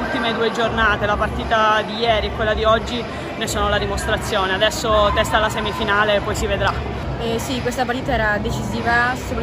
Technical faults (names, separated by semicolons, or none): none